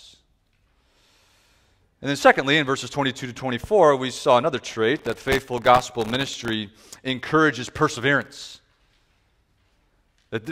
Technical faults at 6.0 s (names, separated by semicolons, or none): processor overload crackle